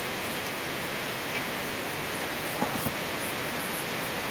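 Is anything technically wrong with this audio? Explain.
No, there are no technical faults in this audio.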